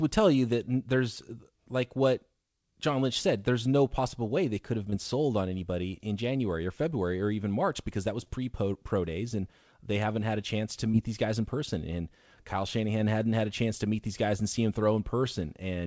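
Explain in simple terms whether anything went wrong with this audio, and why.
Short concealed packet loss occurs three times: 4.90–4.94 s (after "way they could have"), 8.24–8.39 s (after "because that was") and 10.91–10.95 s (after "had a chance to"). A sliver of the call arrived too late, so the receiver stretched the preceding sound to cover it, leaving a brief smear. The call line itself, which drops everything above 8 kHz, isn't a fault.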